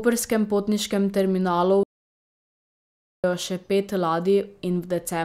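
Right after "potniškem terminalu", at 1.83 s, the speech drops out to silence until 3.24 s, picking up again at "še pet". That's about 1.4 s of dead silence with no room tone, likely a lost input link while recording carried on.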